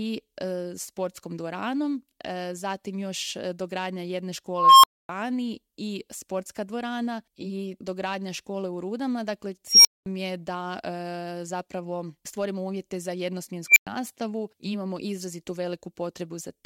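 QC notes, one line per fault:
4.52–5.09 s, unstable filter: a recursive filter's output runs away, so a tone near 1 kHz swells over 0.32 s, clips, then drops to 0.26 s of silence.
9.68–10.06 s, unstable filter: the filter diverges again, so a high squeal around 5 kHz builds in 0.17 s to clipping before cutting out for 0.21 s.
13.68–13.87 s, unstable filter: a faster runaway produces a beep near 2 kHz that reaches clipping within 0.08 s, then overflows into 0.11 s of silence.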